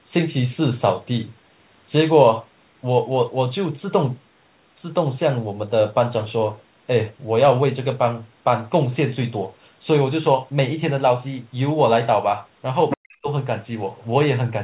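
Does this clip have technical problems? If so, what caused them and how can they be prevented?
Yes. From 12.90 to 12.97 s a brief scrap of a second voice breaks in, nearly as loud as the speech. This is likely the other side's voice leaking through, where loudspeaker sound reached the microphone and the echo canceller did not remove it. A headset, or a lower loudspeaker volume with the speaker kept away from the microphone, would prevent it.

Right after that, from 12.96 to 13.29 s, the speech sinks very deeply for about a third of a second. The likely cause is speech suppressed in double talk: with both sides sounding at once, the echo canceller could not separate the two and turned everything down. A headset that removes the echo, or an echo canceller with better double-talk detection, would keep the speech open.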